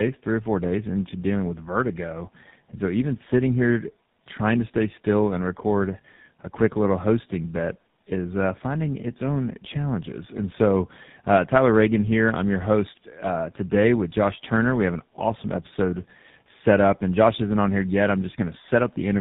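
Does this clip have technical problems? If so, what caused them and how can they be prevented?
Yes. The speech has tandem speech coding throughout. It sounds rough, muffled and warbly, with nothing above 3.8 kHz. This points to a chain of a low-rate AMR-NB stage (around 7.95 kbit/s), a G.711 mu-law link and a final GSM full rate stage, so two speech codecs in a row. Each one decoded the signal and re-encoded the already damaged output of the previous one, and their distortions add up. Prevention: keep one codec end to end through transcoder-free operation or codec negotiation across network borders.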